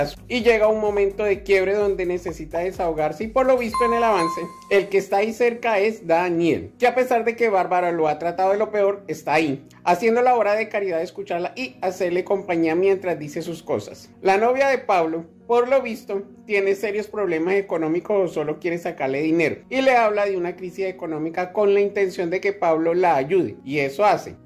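No technical faults can be heard anywhere in the audio; the signal stays steady and intact throughout.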